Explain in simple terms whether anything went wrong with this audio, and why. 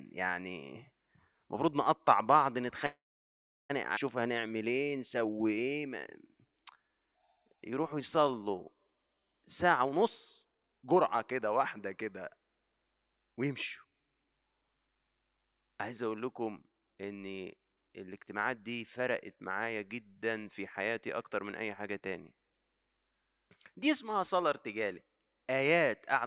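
At 2.86 s the speech stops and a brief buzz fades into near-silence until 3.71 s, when it picks up where it left off. That is a call audio freeze: audio packets were likely held up in transit, and the receiver's jitter buffer ran dry.

Right after, between 3.95 and 3.98 s, the speech jumps forward. About seven-tenths of a second is missing, and the two sides are joined almost seamlessly. This skip ahead came from a stretch of audio being dropped, either in transit or by the jitter buffer, while later audio was already waiting.

From 4.21 to 9.39 s the speech drags at about 89% of normal speed but keeps the same pitch, with sounds stretched out. This jitter buffer slow-down repeated tiny slices of sound to rebuild its reserve, adding about 0.6 seconds in total.

The speech then sounds rushed in four stretches: 9.45 to 10.02 s (119% speed), 10.42 to 11.48 s (127%), 12.98 to 14.32 s (106%), and 18.31 to 22.02 s (109%). 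Each is a jitter buffer speed-up, where short pieces were cut to reduce built-up delay. Altogether about 0.8 seconds was removed.

Throughout, the call codec passes nothing above 4 kHz, which gives the narrow telephone sound.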